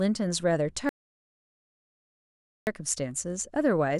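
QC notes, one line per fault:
0.89 to 2.67 s, audio dropout to silence: the speech cuts off mid-flow and comes back about 1.78 s later, with dead digital silence in between and no room tone at all. Likely the input dropped out while the recorder kept writing silence, so that stretch is gone.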